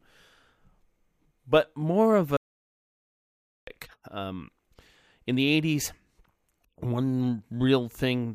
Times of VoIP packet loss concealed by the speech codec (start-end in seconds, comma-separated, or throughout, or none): none